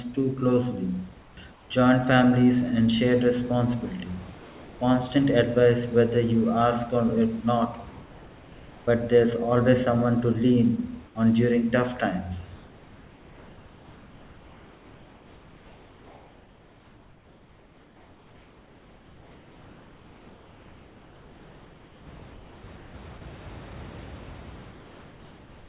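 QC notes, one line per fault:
1.22–1.7 s, 11.06–11.15 s, 12.56–22.94 s and 24.71 s to the end: comfort noise in place of the background. In each pause the real room background gives way to a smooth, featureless hiss. At 11.06 s, between "always someone to lean" and "on during tough times", it sits about 5 dB lower. At the end it is about 2 dB lower. The long stretch after "on during tough times" lasts about 10 s. The likely cause is discontinuous transmission: the sender goes quiet and the receiver synthesises noise. No speech is lost, which sets this apart from a clipped onset or tail.
4.4–4.79 s and 22.19–22.22 s: sound dropped by the voice detector. Right after "families and shared responsibility", about 140 ms of real sound vanishes into steady noise, and the audio returns about 0.39 s later. At 22.19 s a 20 ms sliver is lost in the same way. The likely cause is the detector mistaking quiet sound for background. 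Unlike plain comfort noise, actual signal is missing here, not just room tone. The band stops at 4 kHz throughout, which fits a 64 kbps G.711 A-law call path.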